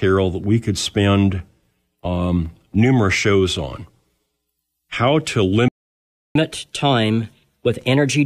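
At 5.68 s the player's output went silent, most likely because it ran out of buffered data or its playback thread was blocked, and that gap is a playback stall. The speech cuts off mid-flow and nothing is heard for about 0.67 s, until output resumes at 6.35 s. The silence reads as a dropout in the middle of a phrase.

From 6.35 s to the end of the clip, the player works off its accumulated backlog by resampling, a catch-up at higher speed. Running the audio 1.15 times faster shortens it enough to win back some of the lost time, but resampling shifts frequency along with tempo. The speech therefore comes out hurried and raised in pitch by about two semitones, and it holds that brisk, slightly chipmunk-like quality for the remaining stretch of the clip.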